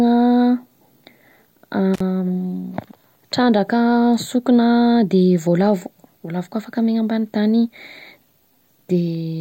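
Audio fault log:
1.94–2.00 s, intermittent contact: the speech cuts out for 50 ms, crackling at both edges with faint hiss in the gap, as a loose connection briefly opens.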